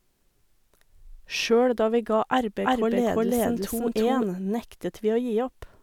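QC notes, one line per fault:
2.64–4.24 s, doubled audio track: a second full-band copy of the speech runs about 0.3 s behind the original at roughly the same loudness, so every syllable is heard twice like a flat slapback. The late copy carries no decay or added room colour, and it cuts in abruptly at 2.64 s and drops out just as suddenly at 4.24 s. This is likely a second capture arriving through a slower path, or two misaligned copies held together in an edit.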